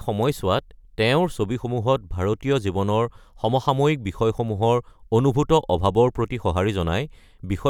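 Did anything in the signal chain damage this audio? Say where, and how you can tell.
No, nothing in this speech stood out on listening as damage from any stage of the signal chain.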